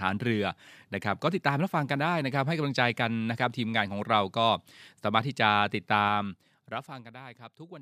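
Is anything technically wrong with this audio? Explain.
Yes. From 6.02 to 7.12 s, zipper noise: a ticking rides on the speech as its level drops about 15 dB in unsmoothed 2 dB steps, around seven per second.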